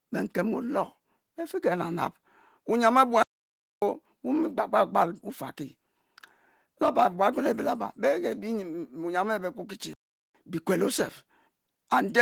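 The player most likely ran short of buffered data or had its output thread blocked, producing two playback stalls. From 3.23 s to 3.82 s the speech cuts to silence for about 0.59 s, and from 9.93 s to 10.35 s for about 0.41 s. Each time the speech halts mid-flow, leaving a clear gap, and then resumes, while the light colouring of the Opus voice compression carries on unchanged around both dropouts.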